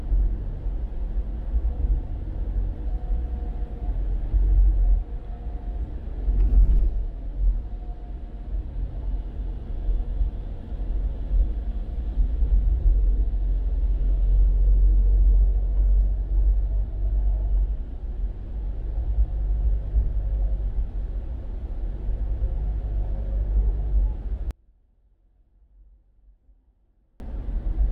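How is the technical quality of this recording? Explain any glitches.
One glitch stands out near the end. From 24.51 to 27.2 s the sound collapses, falling about 30 dB to a faint residue before returning. The likely cause is one channel inverted: with one stereo channel's polarity reversed, everything common to both channels cancels when they are summed, leaving only their small differences.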